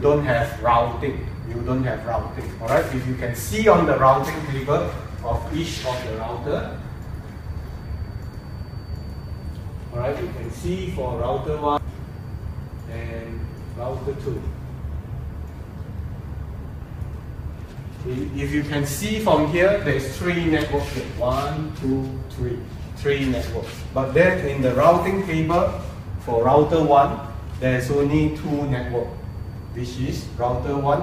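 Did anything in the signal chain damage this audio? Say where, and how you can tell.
Yes. At 11.77 s there is a single, very brief glitch that breaks the sound for an instant. It points to damaged data in a compressed stream, a codec or storage stage fault. Corrupted or missing bytes in the encoded file leave the decoder unable to read that frame correctly. It loses sync, outputs garbage or drops the frame, then locks onto the next valid frame header and carries on.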